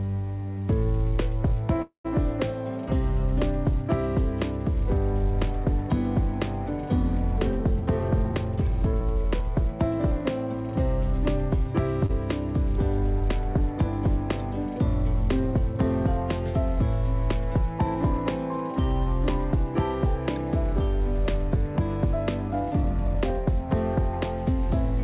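A call audio freeze runs from 1.82 to 2.06 s. The last sound is held and fades, then goes fully silent for about 120 ms before resuming where it stopped, adding 224 ms of delay with nothing lost. The likely cause is delayed packets draining the jitter buffer.

Jitter buffer speed-up appears from 7.37 to 8.46 s and from 8.93 to 10.2 s, at 106% and 105% speed. Each stretch trims roughly 70 ms in many small pitch-period cuts, so the sound hurries forward at unchanged pitch to shed the built-up delay.

A short stall from a late packet comes at 12.06 to 12.11 s. The buffer ran dry, so the receiver stretched the current sound by 30 ms until the packet arrived. The result is a brief held moment with a faint buzz or dip, and nothing missing.

Another jitter buffer speed-up, from 22.48 to 23.38 s at 106%, removes roughly 50 ms. It gives the same rushed, pitch-steady quickening, heard through the G.711 call path's band limit, with nothing above 4 kHz.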